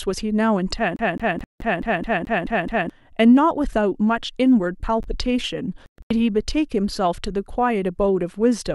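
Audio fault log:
0.96–2.90 s, CD stuck on one turn: the same 0.21 s scrap of speech repeats nine times in a fast, even stutter, with a brief mute at each jump back. A scratch is throwing the laser back one track at the same point on every revolution, so the player keeps replaying that one short turn of the disc until it finally tracks past the damage, giving the mechanical, metronomic loop typical of a skipping CD.
1.44–1.60 s, Bluetooth dropout: a hole of about 0.16 s cuts into the stutter, going silent before the sound returns further along, as though it had kept playing underneath. This is likely a run of audio packets, around eight of them, arriving at the headphones too late and being discarded, leaving the output empty until fresh packets could be decoded.
5.03 s, chunks out of order: a tiny garbled flick, lasting barely a moment. A 10 ms chunk of audio landed one chunk late and played after the piece that should have followed it, so nothing is missing but the sequence is swapped, and the three hard joins where the pieces butt together produce the brief jumbled texture.
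5.86–6.11 s, Bluetooth dropout: the speech breaks up over about 0.24 s, with roughly 0.2 s missing in total, spread as several gaps rather than one, the longest about 0.12 s. The audio picks up later, as if it had run on unheard. The likely cause is around ten packets failing to reach the headphones in time and being dropped in scattered clusters.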